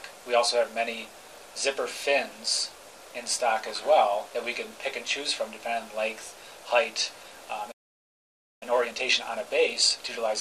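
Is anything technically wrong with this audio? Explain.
Yes. From 7.71 to 8.63 s, a playback stall silences the audio for about 0.9 s, likely because the player ran short of data.

From 8.63 s to the end, time-compressed catch-up trims and cross-fades small pieces to clear the backlog, running about 1.15 times faster at unchanged pitch, unlike a simple speed-up, which raises pitch.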